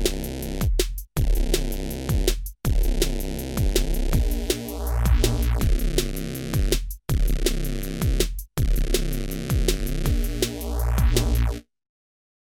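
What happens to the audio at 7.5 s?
Nothing goes wrong at 7.5 s; the audio runs through that moment intact, with no dropout, click or distortion.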